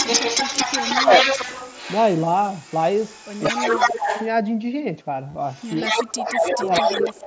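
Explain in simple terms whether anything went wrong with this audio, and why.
Yes, several things went wrong, mostly echo-related.

Echo leak: from 0.00 to 4.28 s and again from 5.46 to 7.25 s, a second copy of the voice trails the original by about 0.18 s. In the first stretch it is as loud as the original; in the second, slightly quieter. The likely cause is a speakerphone on the other end whose echo canceller failed to remove what its microphone picked up.

Speech suppressed in double talk: at 0.88 to 1.26 s, 3.60 to 4.10 s, 5.84 to 5.94 s, and 6.25 s to the end, the voice dips or drops out in pieces, most deeply in the last three. The likely cause is that the echo canceller couldn't separate real talk from echo while both overlapped, so it turned everything down.

Concealed Bluetooth headset packet loss: between 5.29 and 5.35 s, small gaps totalling about 45 ms were patched by repeating recent sound, the longest gap being about 22 ms. 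The patch leaves a small warble where the real audio resumes.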